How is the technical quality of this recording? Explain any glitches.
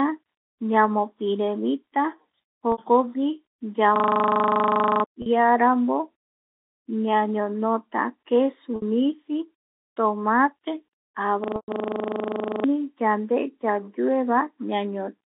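The recording has two kinds of glitch: brief dropouts concealed by pitch repetition, and two longer episodes where the playback system hung and looped. It travels over G.711 telephone coding, which limits it to roughly 250 Hz to 3.7 kHz.

Packet loss with pitch repetition occurs at 2.72 s (60 ms), 5.22 s (40 ms), 8.76 s just after "ñañonota kesu" (60 ms), and 11.56 s (120 ms). Packets went missing, and the receiver filled each gap by repeating the last pitch period while fading it down. The lengths fit runs of 20 ms packets. The shorter gaps sound like a slightly held, buzzy note. The 120 ms one fades further toward silence before the sound cross-fades back in.

The system hang loop runs from 3.96 to 5.04 s and again from 11.44 to 12.64 s, ending just before "yande yayue". The computer or its audio driver stalled while the sound hardware kept cycling through one 40 ms stretch of its ring buffer. 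That short fragment repeats at 25 Hz for over a second, producing a steady buzz at the loop rate. About a second of real audio is lost each time.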